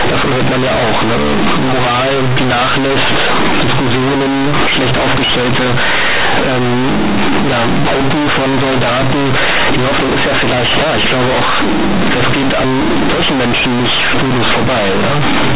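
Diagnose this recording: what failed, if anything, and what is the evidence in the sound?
Companded audio read as linear: a sample-format conversion fault throughout. Mu-law bytes are played as linear 8-bit, so the speech is loud, buzzy and noisy in pauses, with a crushed waveform.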